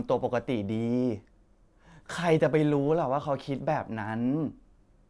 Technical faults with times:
none

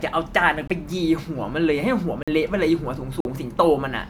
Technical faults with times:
0.00-4.09 generation loss
0.67-0.70 block of digital silence
2.23-2.28 block of digital silence
3.20-3.25 block of digital silence

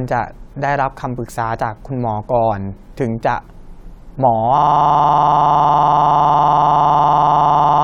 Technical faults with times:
4.58-7.84 system hang loop

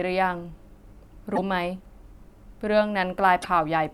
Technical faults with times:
1.35-1.39 broken MP3 bit reservoir
3.41-3.45 broken MP3 bit reservoir

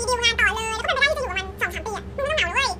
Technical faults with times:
0.00-2.80 audio read two samples at a time (double speed)

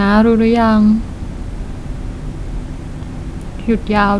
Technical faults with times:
none

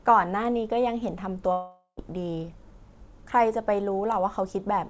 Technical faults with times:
1.52-1.99 long network dropout

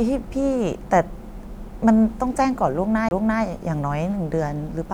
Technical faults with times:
3.09-3.11 CD skip

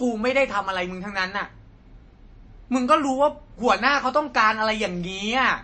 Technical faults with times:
0.00-5.64 MP3 compression

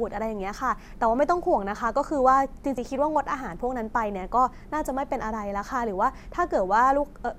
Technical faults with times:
2.77 compressed frames skipped

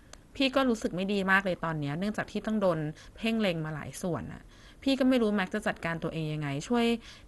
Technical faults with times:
0.00-7.27 MP2 compression

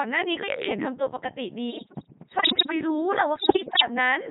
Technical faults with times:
0.00-4.30 Codec 2 vocoder
1.70-2.72 bit errors on digital voice radio
3.36-3.82 bit errors on digital voice radio

